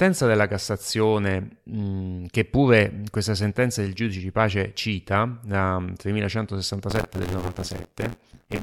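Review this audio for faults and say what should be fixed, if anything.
Buffer tearing, 6.90 s to 8.62 s. An 86.1 Hz buzz fits a 512-sample buffer. About a fifth of each buffer replays audio roughly 40 ms old. Keep the writer safely ahead of the hardware read position, with enough buffer headroom.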